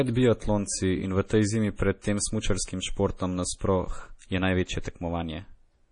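From start to finish the speech carries heavy MP3 compression artefacts: nothing above about 10.2 kHz, with a watery, swirly texture and smeared consonants, which fits a very low bitrate of around 32 kbps as the likely cause.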